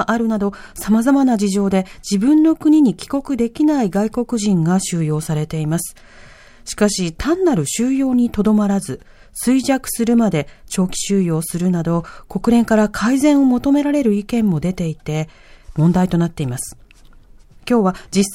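No audible technical faults turn up anywhere in the recording; there are no dropouts, glitches or level problems to report.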